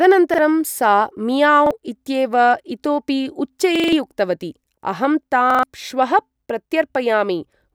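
Repeated buffer at 0.34 and 1.66 s (one repeat each), 3.76–3.93 s (four) and 5.50–5.63 s (three). A 43 ms chunk replays with hard joins, heard as stutters and seen as identical blocks with vertical seams.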